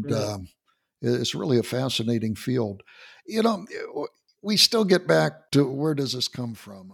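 From 5.57 s to 6.92 s, just after "we still get back", zipper noise appears: the level falls by about 15 dB in unsmoothed steps, roughly 40 a second, each leaving a tiny click. It sounds like a fine ticking under the speech; the waveform envelope forms a staircase, and a spectrogram shows regularly spaced faint vertical lines.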